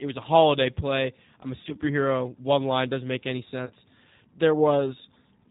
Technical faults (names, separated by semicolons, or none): G.729 codec; VoIP packet loss concealed by the speech codec